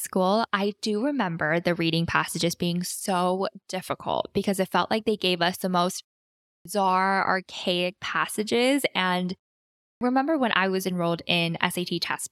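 At 6.53 s, after "gave us the most", and at 9.89 s, both following half-second pauses, a clipped start after a pause drops about 0.12 s while the output wakes, so "archaic passages" and "when I was enrolled" snap in. The waveform jumps from flat silence straight into mid-word speech, with no onset energy on the spectrogram.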